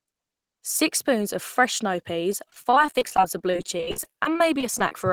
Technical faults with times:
2.32-4.94 repeated packet loss (robotic sound)

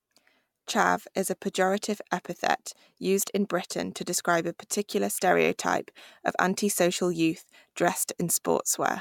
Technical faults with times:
none

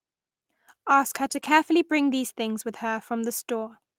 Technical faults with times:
1.25-1.51 lost packet rebuilt from error correction

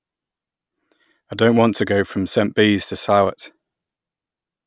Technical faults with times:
none

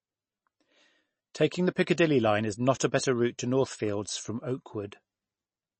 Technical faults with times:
0.00-5.79 MP3 compression

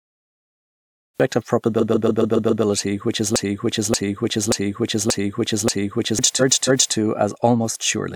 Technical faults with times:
0.00-1.20 cut-off start
1.79-2.63 repeated frames
3.36-6.19 broken-record loop
6.39-6.94 repeated frames

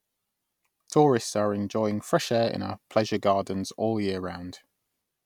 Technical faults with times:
2.31 dropped samples

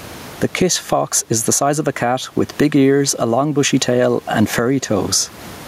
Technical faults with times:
0.00-5.67 gain pumping

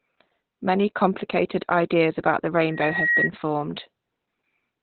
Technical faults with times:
0.00-4.82 Opus voice compression
2.69-3.31 loudspeaker feedback squeal

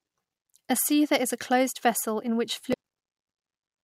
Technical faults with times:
2.70-2.74 damaged data in a compressed stream

